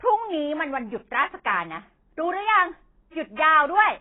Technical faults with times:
0.00-4.01 AAC compression

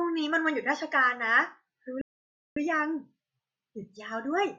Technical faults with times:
2.01-2.56 rebuffering stall

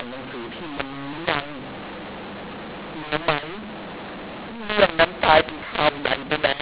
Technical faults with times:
0.00-6.61 mu-law and A-law mixed up

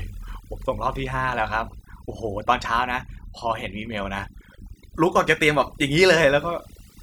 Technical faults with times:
0.00-7.02 overdone noise removal

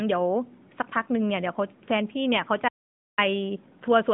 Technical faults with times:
2.68-3.18 audio dropout to silence

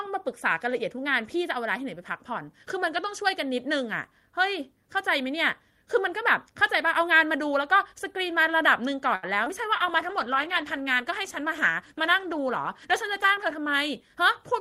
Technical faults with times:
9.15-9.25 short stall from a late packet
9.45-9.48 short concealed packet loss
9.66-13.65 call bitrate drop
13.13-14.54 jitter buffer speed-up

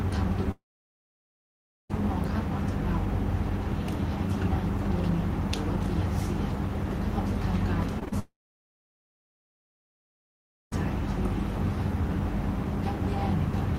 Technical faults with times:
0.51-1.91 long network dropout
7.99-8.14 short concealed packet loss
8.20-10.73 long network dropout

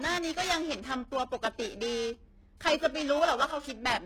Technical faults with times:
0.00-4.05 HE-AAC compression
0.00-4.05 periodic clock jitter

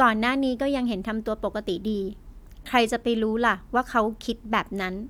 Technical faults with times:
none

